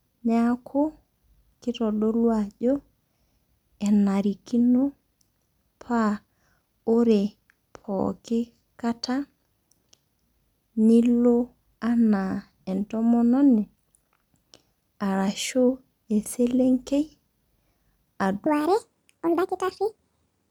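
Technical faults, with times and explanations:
18.46–20.50 s: section at the wrong speed. The final stretch of speech plays 1.59 times too fast. It sounds hurried and about seven semitones higher, likely from a playback clock mismatch.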